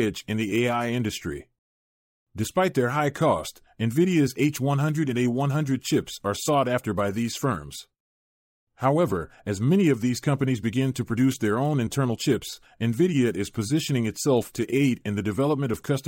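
Pre-echo appears at 10.94 s, between "of these companies begin" and "to produce their own", and again at 14.53 s, just after "is positioning itself". The codec never switches to short blocks, so each sharp onset shares a long transform window, consistent with roughly 26 ms, with the quieter moment before it. The quantisation noise sized for the attack leaks backward about 12 to 14 ms, rising about 12 dB and about 14 dB as a brief hiss that softens each onset.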